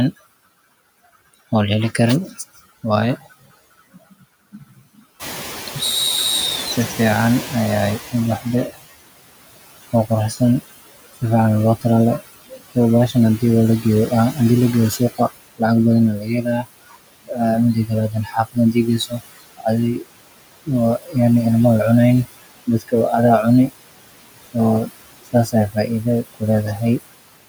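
Noise suppressor artifacts run through the whole clip: the suppressor pulls steady background down by about 18 dB frame by frame, so the residue dips between phrases and swells under speech. Unlike a one-off event, this never lets up.

From 5.19 to 8.7 s comes the noise suppressor catching up. The room noise jumps by about 14 dB at roughly 5 s, and the suppressor's estimate trails it, so the louder noise passes with less reduction at first before sinking over about 3.5 s.

Speech cut by the noise suppressor follows at 9.93–10.41, 11.81–14.37, 16.17–20.02, 20.66–21.16, 22.67–23.7 and 24.42–27.0 s. Here the speech itself is mistaken for noise: parts of the speech drop by about 8 to 21 dB, deepest near the end, sounding swallowed rather than masked.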